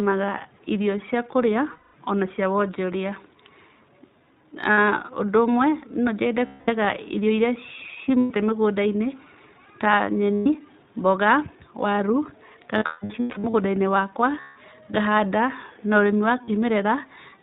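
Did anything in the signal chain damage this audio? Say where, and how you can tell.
Yes. At the codec stage, the whole clip is squeezed into narrowband: nothing above 4 kHz and a rough, synthetic edge on the voice. That's the iLBC codec coding each frame's excitation on its own, and the texture fits its 15.2 kbps, 20 ms mode.

On the network side there are lost iLBC frames at 1.72 s (220 ms, just before "o na cia"), 4.72, 6.46 (220 ms), 8.20, 10.34, 12.78–13.55 (scattered, longest about 150 ms), 14.40 and 16.44 s. Each sounds like a held buzzy vowel as the decoder repeats the last pitch cycle, then the voice snaps back.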